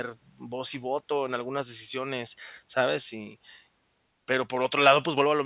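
Nothing in this speech recording stands out as a technical fault; there's simply nothing to point to here.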